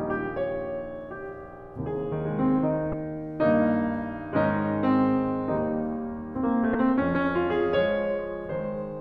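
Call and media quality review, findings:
Damaged data in a compressed stream, 2.90 to 2.93 s and 6.72 to 6.75 s, music. Brief glitches. Decoder misreads corrupted frames, loses sync, resyncs at the next header.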